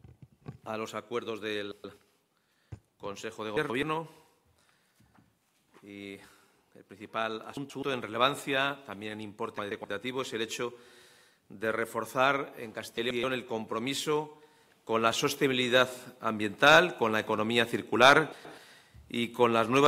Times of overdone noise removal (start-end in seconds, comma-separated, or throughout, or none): none